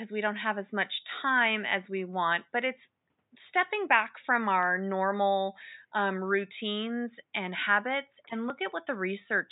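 The speech signal shows no technical faults, with only a faint room noise sitting about 52 dB below the voice as part of the original recording.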